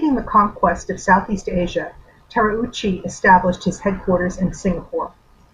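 From start to finish, a video or display buzz leaks in: a screen or video cable couples into the audio path, laying a 50 Hz field-rate buzz with hash above it under the speech, plus a thin 15.6 kHz line-rate whine, around 40 dB down.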